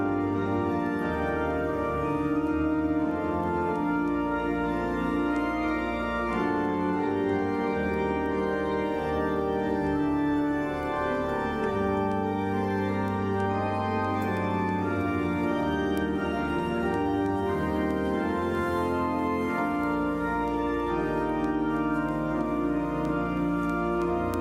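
From 0.22 s to 24.34 s, word clock ticks run through the audio. They come steadily, about every 0.3 s, roughly seventy in all. Each is a short, sharp tick, and their strength varies. A receiving device is reading a digital link on its own clock, not locked to the sender. The two clocks differ by something like 70 parts per million. Each time they slip past each other, one sample is dropped or repeated.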